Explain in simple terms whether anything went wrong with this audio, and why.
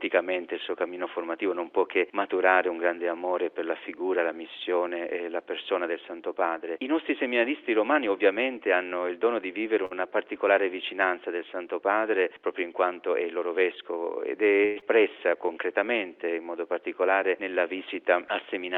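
Four network hiccups show up here, all in the second half.

At 9.85 to 9.96 s there's a short stall from a late packet. A chunk of audio showed up late, so the player held the last sound for about 54 ms until it arrived. Nothing is lost, but that moment drags briefly with a slight buzz or dip.

From 13.09 to 13.51 s you get a jitter buffer speed-up. Too much audio had piled up waiting, so the player trimmed tiny slivers, roughly 70 ms in total, to catch up. The sound plays at about 115% speed with unchanged pitch, so it feels a bit rushed.

Around 14.65 to 14.84 s the sound smears into a fading buzz or hiss for about 166 ms, and when it comes back, roughly 80 ms is simply gone. That's most likely a long network dropout, where nothing got through for a moment and the player improvised to fill the gap.

Right after, from 15.14 to 15.54 s, there's a jitter buffer slow-down. The reserve had run thin, so the player stretched things by repeating tiny bits, adding 64 ms. 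The sound slows to about 86% speed at the same pitch and comes out drawn out.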